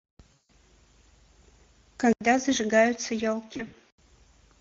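Speech, with Speex codec damage throughout: the sound is hoarse and noisy, fitting a mid-rate setting near 16.8 kbps, and a spectrogram shows smeared, noise-like texture instead of clean harmonics. From 0.33 to 0.5 s, VoIP packet loss concealed by the speech codec stretches about 160 ms into a fading buzzy tone or coloured noise, seen as flat, decaying bands. From 3.53 to 3.74 s, about 100 ms of loss in runs up to 60 ms leaves brief smears. At 2.13 s, an 80 ms gap appears in the waveform; the sound turns duller until 3.98 s, with nothing above 6.6 kHz and faint new background noise, likely an input switched to a poorer device.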